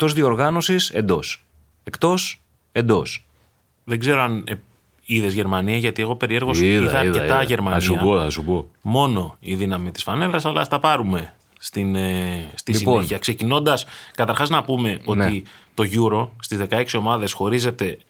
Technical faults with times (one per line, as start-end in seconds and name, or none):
none